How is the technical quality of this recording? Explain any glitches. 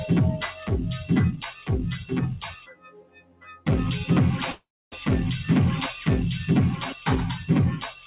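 The recording has clear processing faults: a speech-oriented noise suppressor working on non-speech material, three spells where it cuts the sound hard, and one stall of the call audio. Because nothing reaches above 4 kHz, the audio has passed through a narrowband telephone-style codec.

The noise suppressor applied to music or sounds runs for the whole clip. Tuned for speech, it treats steady tones, ambience and decaying tails as noise and pulls them down while sharp onsets get through. Level swings by roughly 10 dB, so the sound pumps and thins. On a waveform the envelope bobs unevenly. On a spectrogram, sustained bands fade in and out behind crisp attacks.

The sound cut by the noise suppressor happens three times: 0.53 to 0.70 s (about 7 dB), 1.51 to 1.69 s (about 10 dB) and 2.41 to 3.67 s (about 19 dB). Each time the suppressor judges the held material to be noise and ducks it further, so tails vanish early and the third passage sinks by about 19 dB for over a second. 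The waveform shows a pinched, shrunken envelope, and the spectrogram goes faint apart from transient streaks.

A call audio freeze runs from 4.52 to 4.94 s. The sound stalls and is stretched by a continuation of the last sound that fades into about 0.27 s of silence, then resumes where it stopped. Nothing is skipped, but everything after it lands about 0.40 s late. The likely cause is delayed packets emptying the jitter buffer, with the receiver filling the wait. On a spectrogram a smeared, repeating texture trails into a blank gap. The waveform shows a decaying fill, then a flat line.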